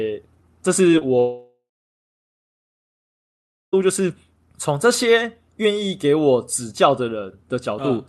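Speech with two short concealed packet losses, at 0.91 to 0.95 s and 0.99 to 1.03 s, heard as quick smears where the decoder extended the last sound; spectrograms show briefly blurred, stretched harmonics. From 1.19 to 3.75 s a fading buzz or hiss gives way to about 2.1 s of silence, likely a long network dropout, visible as decaying bands, then a flat empty waveform.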